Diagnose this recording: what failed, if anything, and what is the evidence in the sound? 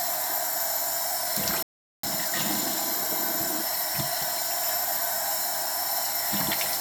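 The failure sits at the playback stage: a playback stall, most likely the player's buffer running dry or its output thread being held up so that no fresh samples reached the device. In the sound this shows as an abrupt drop to silence in mid-flow from 1.63 s to 2.03 s, a gap of about 0.41 s, after which the audio resumes.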